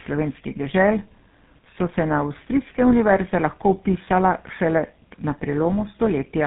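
Tandem speech coding runs throughout the speech, with nothing above 3.8 kHz. The sound points to three passes through a GSM full-rate-style coder, each re-encoding the previous pass's decoded output. The errors compound, leaving the voice rough, muffled and warbly.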